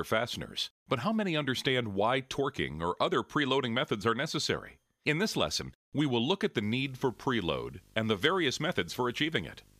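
From 6.62 s to the end, a 50 Hz buzz with a layer of hash above it sits roughly 25 dB below the main sound, joined by a thin, very high whine at 15.6 kHz. This is video or display buzz: a screen or video cable coupling into the audio at the picture's field and line rates.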